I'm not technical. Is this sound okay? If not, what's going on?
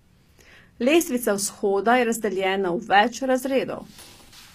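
No. The speech has plainly audible damage from start to finish, likely from HE-AAC compression. This squeezes the sound hard and rebuilds the high end from copies of lower sounds. S sounds turn gritty and lispy, and there's nothing above 14.9 kHz.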